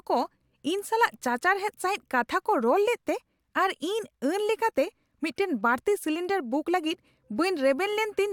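Listening to this speech recording, nothing stood out as a technical problem at any point.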